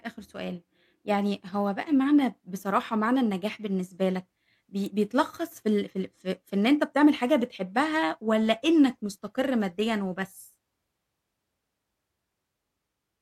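At 4.86 s there is a bit error spike: a single sharp tick, lasting only a moment, that has nothing to do with the speech around it. One bit in the stored or transmitted data flipped, so the sample value jumped by a power of two and immediately snapped back. The tick's brevity points to a run of about three corrupted samples. It peaks near about -23 dBFS, and its energy spreads across the whole spectrum.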